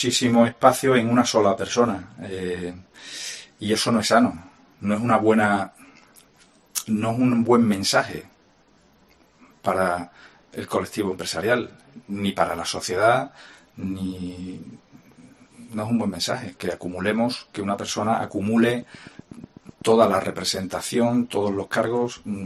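A train of clicks runs from 18.70 s to 20.43 s, about fifteen near-identical pulses at a steady 8.1 per second, heard as regular ticking laid over the audio. Each click peaks at roughly the level of the sound itself. The even spacing and matching shape of the pulses point to a repeating external disturbance, likely electrical interference from nearby equipment or a faulty connection or power supply.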